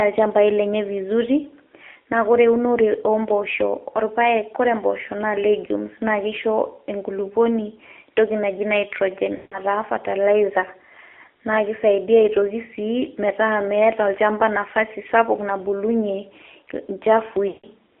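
From the start the speech carries the AMR narrowband mobile codec. Its buzzy, synthetic quality fits the 7.4 kbps mode. A spectrogram shows energy only between 300 Hz and 3.5 kHz, with smeared, blocky harmonics where the pulse-driven vocal tract model is rebuilding the voice.

At 9.36 to 9.60 s and again at 17.48 to 17.67 s come lost AMR speech frames. The decoder held the last good pitch and vocal tract settings while lowering the gain, so the sound stretches and fades to silence over about 160 ms, which fits a run of eight 20 ms frames. On the waveform the envelope tapers smoothly to nothing. The spectrogram shows frozen, flat harmonics that dim out.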